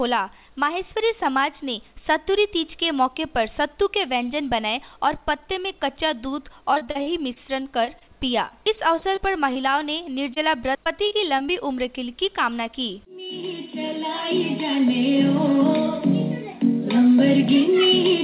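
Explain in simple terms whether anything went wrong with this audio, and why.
Repeated packet loss (robotic sound) occurs from 6.74 to 8.03 s, 8.49 to 9.74 s, and 10.84 to 11.50 s. Pieces of the audio arrived too late and kept being patched by stretching the previous sound. This leaves choppy stretches with small bits missing, the worst of them in the first stretch.

A single short concealed packet loss occurs from 10.34 to 10.38 s. About 20 ms of audio never arrived, and the receiver covered the hole by continuing the sound just before it. This is heard as a brief smear or wobble. All of the sound, including these moments, stops at 4 kHz, which fits a narrowband call path.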